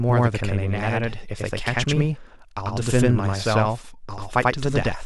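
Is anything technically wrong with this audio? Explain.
Yes. Throughout the speech there is a channel delay (doubling) fault: one channel arrives about 92.9 ms behind the other, which fits a 4096-sample buffer holding it back, and the two are then summed to mono. Because the gap is far too long to blend, the late copy is heard on its own at the same level, so every syllable is followed by a distinct slap echo, giving the speech a doubled, smeared quality.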